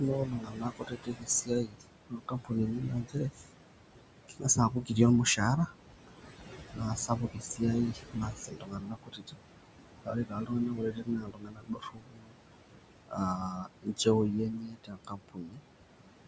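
Noise suppressor artifacts run through the whole clip. The suppressor pulls down the bands it judges to be steady noise by about 21 dB, frame by frame. The room noise sits only about 9 dB below the speech. What is left of it sinks in the gaps and swells under the speech. A plain gate would open and close the whole signal together. This works band by band, which is what makes it sound like that.

Speech cut by the noise suppressor comes from the same process misjudging speech as noise. It happens from 0.0 to 3.48 s, 4.28 to 4.97 s, 5.36 to 5.77 s, 6.08 to 6.29 s, 6.72 to 9.37 s, 10.05 to 12.39 s and 13.08 to 15.63 s. The speech is turned down by about 20 to 22 dB in parts of each span: roughly three seconds in the first, a few hundred milliseconds or less in the short ones, and about two seconds in each of the later long ones. Consonants and endings sound swallowed and faint. A network dropout would leave a hard gap, often with a click. 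Here the attenuated speech fades with the background instead of cutting off.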